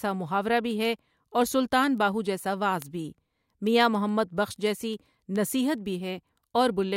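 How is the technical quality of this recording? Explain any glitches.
The recording has a steady ticking fault from about 0.15 s to 6.91 s: word clock ticks, around fifty of them, roughly every 0.15 s. The receiving device isn't locked to the sender's clock and drifts by about 150 ppm, so each time they slip, a single sample gets dropped or repeated. You hear a sharp click each time.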